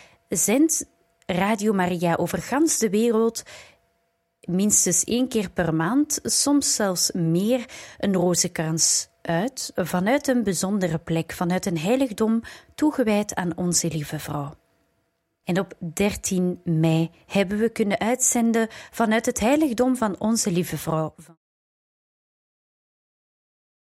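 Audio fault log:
No technical faults are present, and the level eases down in a smooth fade-out that begins around 21 s and reaches silence by 21.38 s, with no click or hard edge.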